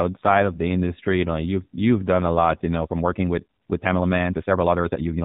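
From the first moment, the speech carries the sound of an AMR narrowband mobile codec. Everything above 4 kHz is gone, so the voice is dull and boxed in. The codec rebuilds speech from a vocal-tract model fed by sparse pulses. Here the damage is plainly audible. The voice turns buzzy and synthetic, which fits one of the lower AMR-NB modes, around 7.4 kbps.

At 2.83 s the pace suddenly jumps and stays fast to the end. Delivery runs about 1.62 times quicker, yet the pitch does not rise. That points to a time-stretched section, likely software squeezing the audio to fit a length. It keeps pitch by dropping short pieces of the waveform. The result sounds rushed.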